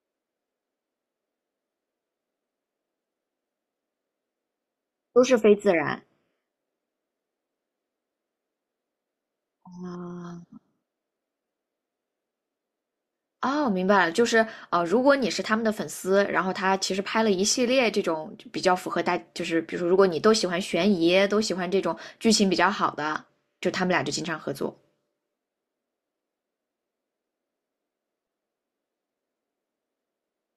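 A recording of speech with no technical faults in its signal path.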